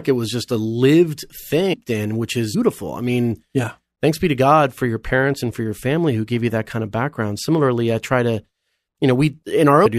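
At 1.72 s the speech is broken by a brief glitch. This is damaged data in a compressed stream. Some bytes in the encoded file are wrong at that point. The decoder cannot read the affected frame, loses its place, and hunts for the next valid frame header. The garbled output lasts under 20 ms. The same fault returns at 2.53 s, with another short glitch of similar length.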